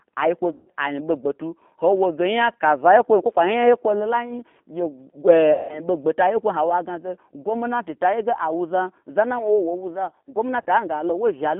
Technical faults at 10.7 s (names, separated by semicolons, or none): G.729 codec; VoIP packet loss concealed by the speech codec